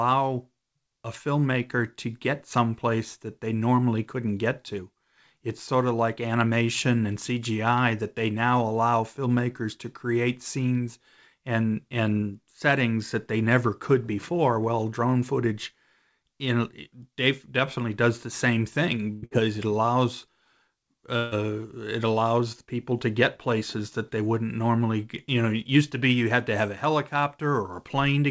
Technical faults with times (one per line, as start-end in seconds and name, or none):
19.13-19.34 burst of packet loss
21.17-21.34 burst of packet loss